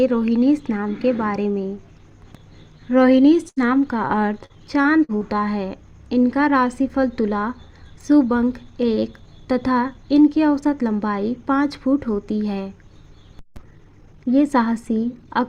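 At 3.49 to 3.59 s a burst of packet loss holds and fades the last sound for 73 ms, then jumps ahead 40 ms. It is one continuous hole, not a series. From 4.08 to 5.24 s, repeated packet loss leaves five separate patched gaps, the longest 43 ms and together covering 14% of the stretch, so the audio sounds choppy rather than briefly frozen. Between 9.97 and 10.27 s a jitter buffer speed-up plays the audio at 111% speed by trimming roughly 40 ms of pitch periods, so it sounds hurried without dropouts or any change in pitch.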